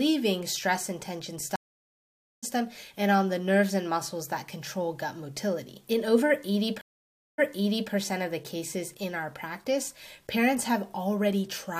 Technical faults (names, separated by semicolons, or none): stream reconnect